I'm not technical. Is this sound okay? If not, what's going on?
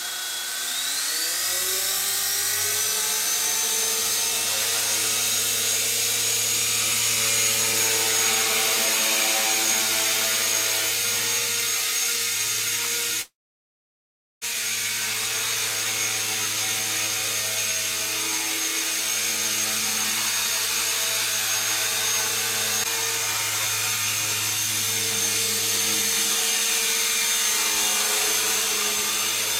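No. At 13.21 seconds the sound breaks off for about 1.2 seconds, until 14.44 seconds. The last bit of sound is stretched into a brief fading buzz, then about 1.1 seconds of near silence follows. This is a long network dropout, likely caused by the connection stalling so no audio got through. Unlike a quick glitch or crackle, it lasts over a second, and the audio resumes later with that stretch simply missing.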